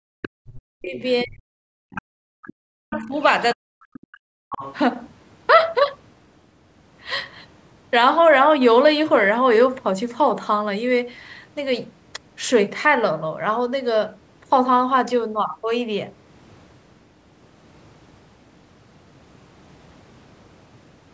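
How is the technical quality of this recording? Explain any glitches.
The first five seconds of this speech recording are damaged by two linked echo-cancellation faults on a call, and the audio carries nothing above 8 kHz because it passed through call microphone processing.

Speech suppressed in double talk occurs from 0.09 to 3.17 s and again from 3.54 to 4.4 s. The talker's voice sinks sharply, at its deepest by about 40 dB. The likely cause is that the far end was speaking at the same moment and the echo canceller, unable to tell the local talker from loudspeaker echo, attenuated everything.

The other side's voice leaks through in short scraps at 0.23 to 0.28 s, 1.95 to 2.02 s and 2.47 to 2.52 s, then in longer stretches from 2.91 to 3.23 s and 4.5 to 4.75 s. It sits roughly 15 to 25 dB below the main speech and is loudest in the two longer stretches. It is likely residual loudspeaker echo that the canceller failed to subtract from the microphone.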